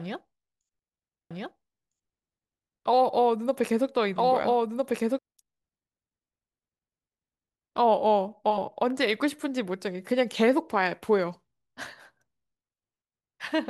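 A doubled audio track runs from 1.31 to 5.19 s. A full-band copy of the speech trails the original by about one and a half seconds at roughly equal level, cutting in and out abruptly. It likely comes from a slower second capture path mixed in.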